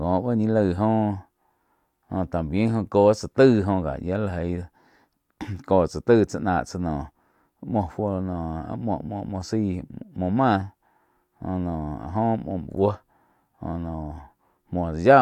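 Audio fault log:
Nothing here needs logging; the speech comes across without any technical faults to report.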